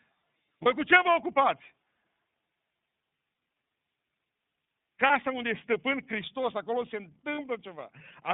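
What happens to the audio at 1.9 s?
At 1.9 s the speech carries iLBC codec damage, present through the whole clip. Each 30 ms frame is coded independently, leaving a plainly rough, synthetic texture. A spectrogram shows a hard ceiling near 3.7 kHz and little below 150 Hz, which fits a narrowband mode around 13.33 kbps.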